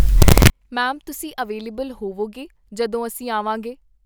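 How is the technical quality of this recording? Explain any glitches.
The recording has one clear glitch at the very start; after that the speech comes through without any further fault I can pick out.

From 0.0 to 0.5 s the sound is samples built from the wrong bytes. For that half second the decoder assembled each sample from mismatched bytes, shifted by one or reversed in order, so the rapidly fluctuating low-order bits landed in the high-order position. The result is a burst of loud, harsh noise. Ordinary background hiss would sit quietly beneath the signal, and clipping would keep the speech recognisable but flattened. Here the fault produces loud, harsh broadband noise instead.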